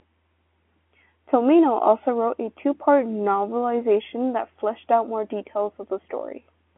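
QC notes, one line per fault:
No faults to log for this speech clip, so the QC notes run to this single line.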